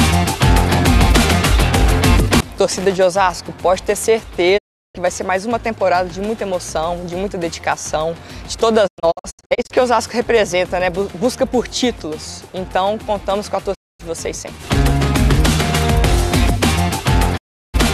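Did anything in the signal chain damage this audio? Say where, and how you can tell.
Yes. In the analogue wiring, a worn or dirty contact in a loose connector made and broke the circuit between 2.78 and 3.03 s. The signal was chopped, producing a short, irregular burst of loose connector crackle.

At the network/reception stage, the receiver repeatedly lost good frames and muted, a digital broadcast dropout. The audio fades out over about 20 ms and vanishes at 4.57 to 4.97 s, 13.73 to 14.01 s and 17.36 to 17.76 s. From 8.86 to 9.72 s it breaks into scattered short holes, the longest about 96 ms. The missing material never returns.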